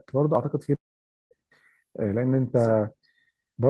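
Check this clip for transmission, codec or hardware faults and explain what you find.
Two transmission faults are audible, both in the first second and a half of the speech.

Short concealed packet loss, 0.65 to 0.69 s: about 20 ms of audio arrived too late to decode, so the receiver extended the preceding sound across the gap before rejoining the real signal. It comes through as a brief smear or wobble in the speech.

Long network dropout, 0.75 to 1.33 s: this is likely a network dropout, with roughly 0.56 s of audio never arriving. The receiver first carries the last sound forward as a fading buzz or hiss, then about half a second of silence follows. Speech resumes afterwards with that stretch missing.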